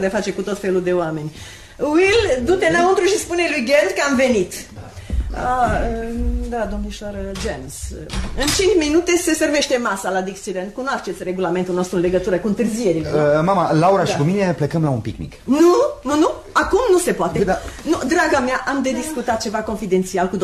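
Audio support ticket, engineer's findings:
Dropped samples at 19.59 s. Likely a brief gap in the sample stream, with a handful of samples, about a tenth of a millisecond, skipped. The waveform jumps straight to a later value. Far too short to lose any audible content. Heard as one sharp click, a thin vertical line across the spectrum.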